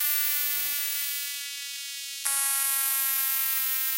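A short recording of everyday sounds, with no technical fault to be heard anywhere in it. Nothing in the audio points to a problem in how it was captured or carried.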